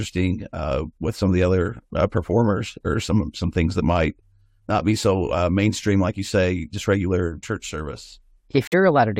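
Speech clip with a corrupt frame muted fault: at 8.67 s, right after "just regular church service", the audio drops abruptly into silence for about 64 ms, which fits three consecutive compressed frames rejected by the decoder and replaced with silence, timing intact.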